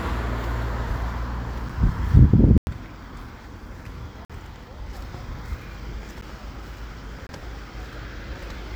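Output buffers went unfilled in time, so blocks of digital silence replaced the audio at 1.69 s (7 ms), 2.58–2.67 s (93 ms), 4.25–4.30 s (46 ms), 6.21 s (11 ms) and 7.27–7.29 s (23 ms). The longer gaps fit 4096-, 2048- and 1024-sample buffers. Each cut is abrupt, so the shortest ones sound like ticks and the longest like brief holes.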